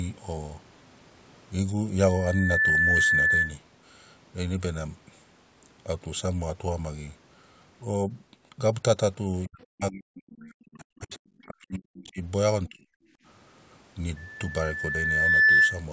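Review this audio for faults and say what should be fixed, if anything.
A loudspeaker feedback squeal appears twice, at 2.07–3.56 s and 14.16–15.85 s. Each is a steady 1.8 kHz tone. The microphone re-amplifies its own loudspeaker output at that frequency. The first builds over about half a second to about 5 dB above the speech. The second builds over about 1.5 s to about 10 dB above. Moving the microphone away from the loudspeaker, or lowering playback gain, would prevent it.

Speech is suppressed in double talk at 9.47–12.20 s and 12.68–12.87 s. The talker's level drops by as much as about 40 dB across roughly two seconds, then by about 25 dB. The likely cause is an echo canceller turning down both voices when both sides spoke at once. A canceller with better double-talk detection would prevent this.

The other side's voice leaks through briefly at 11.39–11.43 s. It is a faint scrap, about 35 dB below the speech. 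The likely cause is loudspeaker playback that the echo canceller failed to remove from the microphone signal. A headset, or stronger echo cancellation, would prevent it.

The background is gated by the echo canceller at 13.15–13.25 s. Room sound drops by about 18 dB for about a tenth of a second, then returns. The canceller clamped the microphone while the loudspeaker played. Gentler suppression with comfort noise would prevent the audible dip.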